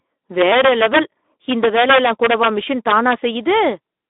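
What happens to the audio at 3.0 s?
Integer overflow hits between 2.88 and 3.14 s. The signal is driven about 2 dB past the largest value the integer path can hold. Nothing limits it there, so each peak over the ceiling wraps around to the opposite sign. The waveform jumps across its full range in one sample. You hear sharp, violent cracks on the loudest moments of the speech. They are much harsher and more abrupt than ordinary clipping.

The Speex codec damage runs through this moment too, as it does across the whole clip. The speech sits in a narrow line band of roughly 250 Hz to 3.6 kHz, with nothing above 3.8 kHz. Too few bits are left for the excitation signal, which fits a setting around 11 kbps. The result is plainly audible: a hoarse, noisy texture under the cracks.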